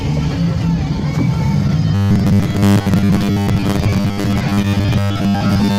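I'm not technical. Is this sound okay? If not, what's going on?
No. Two kinds of fault are audible.

At 1.67 s and again at 4.62 s there is short concealed packet loss: about 20 ms of audio failed to arrive, and the receiver patched the gap by stretching the previous sound. Each one is a single quick smear or wobble, over almost instantly.

From 1.95 s to the end there is robotic sound from repeated short buffers. Unlike those brief blips, this lasts: the audio turns into a steady, metallic 100 Hz buzz. The likely cause is the software replaying the same 10 ms snippet while most of the real sound is skipped.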